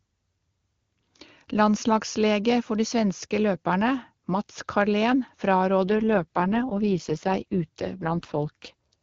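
Speech carried over an AMR wideband (HD Voice) link that sounds clean at first. From 5.82 s to 8.94 s there is an AMR rate drop. The band stays the same and nothing cuts out, but the voice turns rough and synthetic. That fits the network lowering the codec from about 23.85 to 6.6 kbit/s.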